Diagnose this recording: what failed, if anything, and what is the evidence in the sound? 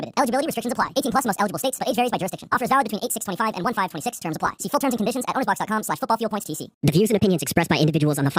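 The fault is a wrong sample rate at the playback stage, and it runs for the whole clip. Everything sounds hurried and raised about 7 semitones, a musical fifth, because speed and pitch both rise by 1.5 times. That ratio fits samples recorded at 32 kHz being clocked out at 48 kHz with no resampling. A spectrogram would show every component shifted up by half its frequency and compressed in time. On the waveform, each event and every periodic cycle is two-thirds as long as it should be.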